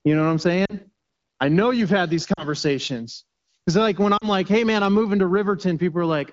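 Right after "know what I'm" at 0.65 to 0.74 s, then again at 2.34 to 2.45 s and 4.17 to 4.25 s, you get lost AMR speech frames. Each is about 40 ms, fitting two frames. The wideband decoder patches the gap with a quick smeared fade, and the speech comes back a touch rough.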